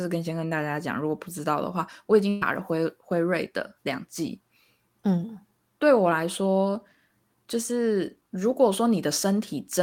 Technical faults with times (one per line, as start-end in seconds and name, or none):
2.29-2.44 burst of packet loss